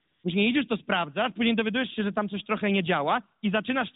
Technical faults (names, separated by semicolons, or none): AMR comfort noise